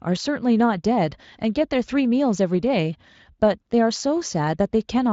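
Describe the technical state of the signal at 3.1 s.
At 3.1 s the audio is intact, with the Speex codec coding the speech normally and adding no fault at that moment.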